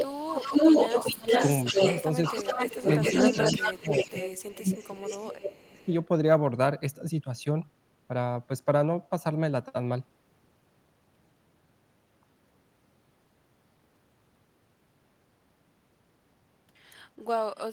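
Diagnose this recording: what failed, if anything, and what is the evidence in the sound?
Speech suppressed in double talk, at 0.00–0.27, 1.03–1.32, 1.71–1.80, 3.00–4.16 and 4.61–5.91 s: the speech dips by roughly 10 to 25 dB, likely from call-processing echo suppression turning down the loudspeaker-side talker along with the echo.

Echo leak, from 0.00 to 5.82 s: a copy of the speech returns 376 ms late at nearly equal level, likely a loudspeaker echo the far-end canceller failed to remove.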